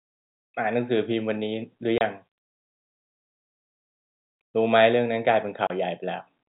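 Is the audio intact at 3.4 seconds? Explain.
Yes, at 3.4 seconds the speech is intact, with no dropout, click or other fault, and only the narrow telephone band of the G.711 coding can be heard there.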